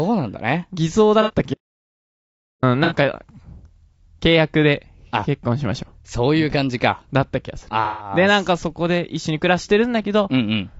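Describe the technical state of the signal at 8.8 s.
Low-delay AAC compression is present at 8.8 s, as it is across the whole speech clip. The speech sounds rough and grainy, with noise filling the gaps between pitch harmonics. That is likely AAC-ELD's short frames starved of bits, which fits a rate near 32 kbps.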